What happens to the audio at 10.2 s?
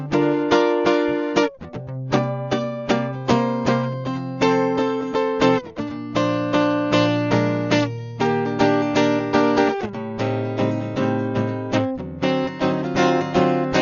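At 10.2 s the music carries the same damage it has from start to finish, most likely Dolby Digital compression at a very low rate, consistent with a stream of around 48 kbps. The encoder has cut the band off at about 6.9 kHz and left many frequency lines without mantissa bits, so the decoder fills them with dither noise. The music sounds dull, with rough, fluttering noise around tones. On a spectrogram there is a hard ceiling at 6.9 kHz and speckled noise beneath it.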